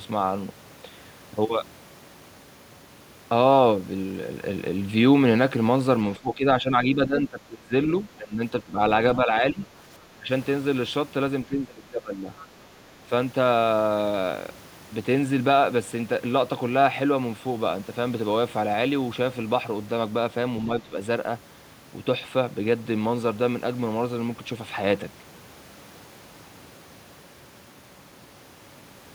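From 6.18 to 8.79 s the talker's speech sinks in pieces by as much as roughly 20 dB, and it dips again at 9.16–9.69 s (around 10 dB), 10.16–10.29 s (about 15 dB) and 11.47–12.29 s (roughly 20 dB). This is speech suppressed in double talk, likely an echo canceller that couldn't separate the talker from loudspeaker echo while both sides spoke, so it turned everything down. On a waveform the envelope shows sudden notches; a spectrogram shows energy thinning, upper bands first.

At 12.38–12.46 s a brief scrap of the other side's voice leaking through appears, about 25 dB below the talker, most likely residual loudspeaker echo the canceller failed to remove. It sounds faint, and a spectrogram shows a short, weak harmonic smear distinct from the main voice.

A final suppression dip, around 10 dB, hits 20.66–20.96 s, seen as another short notch in the waveform.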